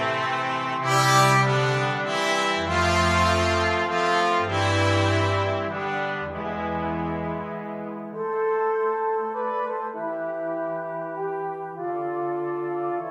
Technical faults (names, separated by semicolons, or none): none